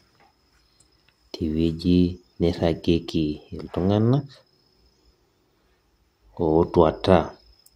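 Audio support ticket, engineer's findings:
No faults found in the speech recording. Nothing to attribute to any component, so no action needed.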